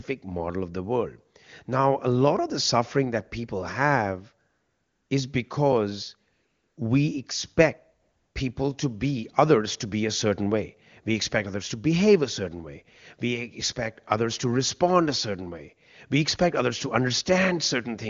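AMR comfort noise fills gaps at 4.49–5.09 s after "suffering that people have", 6.33–6.77 s after "is because", and 8.01–8.35 s before "people to be others". The phone stopped sending speech frames, so the receiver substituted smooth, steady synthetic noise that switches in and out abruptly.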